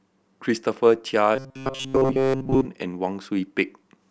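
From 1.36 to 2.67 s, the speech takes on robotic sound from repeated short buffers. It turns into a rigid, metallic buzz near 133 Hz that still loosely tracks the speech. The likely cause is late audio, with the last 7.5 ms or so looped over most of that stretch while the real audio is skipped.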